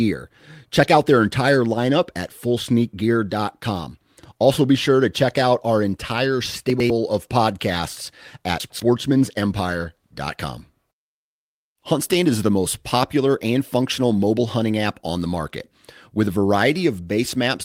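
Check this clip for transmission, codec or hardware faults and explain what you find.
There are two spots where chunks of audio play out of order. The first runs from 6.7 to 6.9 s, right after "check out our entire" and just before "of podcasts". The second runs from 8.6 to 8.8 s, shortly after "of podcasts". Each time, a 100 ms chunk turned up one chunk late and got played after the one meant to follow it. Nothing's missing, but the two pieces are swapped, which leaves hard joins at the edges. You hear a quick jumbled stutter.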